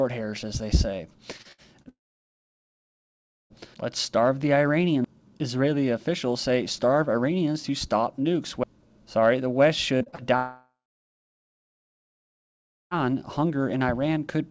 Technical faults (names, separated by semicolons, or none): repeated packet loss (robotic sound); long network dropout